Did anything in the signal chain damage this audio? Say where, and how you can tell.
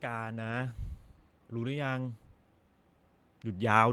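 Yes. A network fault: lost packets rebuilt from error correction, 0.47 to 0.61 s. The decoder played rougher, noisier low-bitrate backup copies. There is no gap. The span fits about four lost packets.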